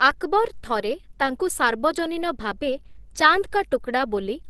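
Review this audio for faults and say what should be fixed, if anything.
Opus compression runs through the whole speech clip. Nothing reaches above about 12.1 kHz, and the speech sounds muffled, hoarse and grainy, with plainly audible coding damage. That combination fits the encoder working in its hybrid speech mode at a rate around 16 kbps, the likely cause. MP3 would leave swirling, watery holes between bands, and a simple low-pass filter would leave the remaining band clean; here the retained range itself is rough. Encode at a higher bitrate, or deliver the uncompressed source instead.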